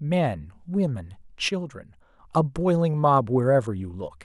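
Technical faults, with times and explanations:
1.49–2.19 s, sudden gain jump: the speech and its background noise drop together by about 6 dB in a single step at 1.49 s, then return just as abruptly at 2.19 s, likely from a digital gain setting applied instantly instead of ramped.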